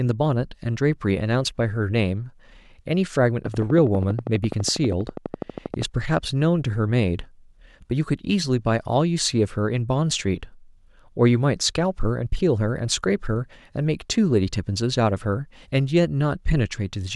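Speech, with a train of clicks running from 3.46 s to 5.83 s. The clicks are evenly spaced at 12.3 per second, about thirty in all, each with much the same sharp shape and peaking roughly 10 dB above the speech, so they tick clearly over the voice and through any gaps. A steady, regular pulse like this is likely interference from nearby equipment or a faulty connection or power supply.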